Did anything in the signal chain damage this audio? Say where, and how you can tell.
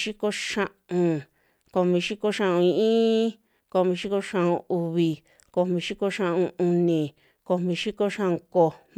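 No, nothing in the signal chain damaged this speech.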